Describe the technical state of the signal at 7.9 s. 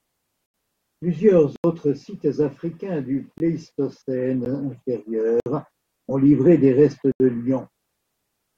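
At 7.9 s the speech signal is intact, with no audible fault at that moment.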